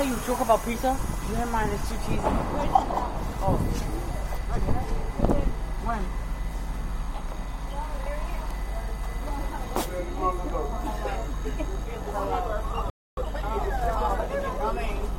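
At 12.90 s the audio stops abruptly and stays silent until 13.17 s, a gap of about 0.27 s. This is a playback stall. The player likely ran short of data, or its thread was blocked, so output went quiet until it recovered.

From 13.17 s to 14.25 s comes time-compressed catch-up. The player trims its built-up backlog by cutting out short pieces and cross-fading across the joins. The sound runs at 1.25 times normal speed. Its pitch stays unchanged, so it simply sounds hurried.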